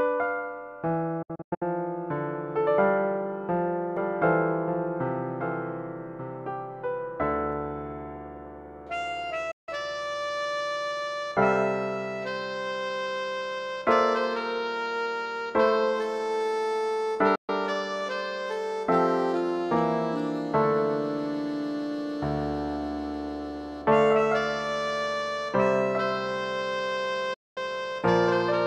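At 1.22 to 1.62 s a digital broadcast dropout mutes the sound in several short holes, the longest about 96 ms, each with an 8 ms fade, as corrupt frames are discarded. From 3.97 to 7.53 s a doubled audio track appears: a dry full-band copy about 10 dB down, roughly a second behind, starting and stopping abruptly, likely from a second, slower capture path. Further dropouts cut the sound at 9.51 to 9.69 s, 17.35 to 17.50 s and 27.34 to 27.58 s. Whatever was broadcast during each mute is lost.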